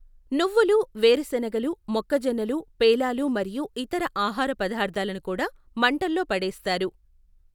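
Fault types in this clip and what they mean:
No fault types are present in this clip.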